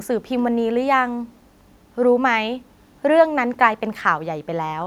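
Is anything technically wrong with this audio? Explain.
No, nothing technically wrong is audible in this speech recording.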